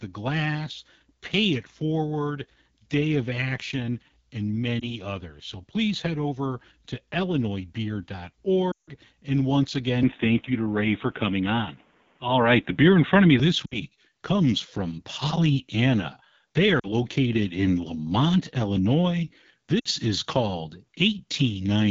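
Throughout, the speech passes through the AMR wideband (HD Voice) codec at a low rate, which fits 8.85 kbit/s, leaving it plainly rough and raspy. Lost AMR speech frames make the decoder repeat its last good settings with falling gain. That gives a brief warble at 4.80 s and about 160 ms that drops to near silence from 8.71 to 8.91 s. Shorter dips follow at 13.65, 16.79 and 19.79 s. From 10.03 to 13.40 s the input was likely switched to a poorer device. Nothing remains above 3.8 kHz, so the sound turns dull, with a level shift of about 5 dB and faint new background noise.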